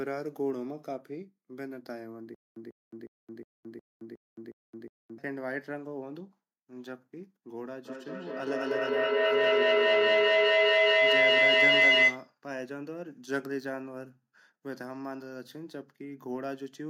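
Speech, with two faults. From 2.35 to 5.18 s there is a stutter with silent gaps: a 144 ms fragment repeats eight times, every 362 ms, separated by about 218 ms of digital silence. The likely cause is a stalled player or stream replaying its last fragment before running dry, so the audio due in that span is lost. From 7.85 to 12.34 s a feedback howl builds to about 14 dB above the speech, centred around 2 kHz and pulsing roughly every 200 ms. Two devices in the same room are on the call, and each trip round the microphone-to-loudspeaker loop adds gain until it rings.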